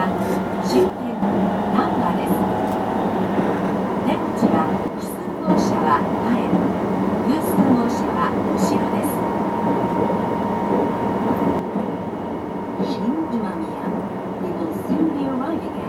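One channel drops out at 0.90 to 1.22 s, 4.88 to 5.50 s, and from 11.59 s to the end of the audio: each time the level falls abruptly by about 6 dB, holding for 0.33 s, 0.62 s and roughly 4.3 s, then snapping back in the first two cases. A sudden 6 dB step is what a mono sum loses when one of two matched stereo channels goes silent, so the likely cause is a stereo channel cutting out before the mix-down, with anything unique to that channel vanishing too.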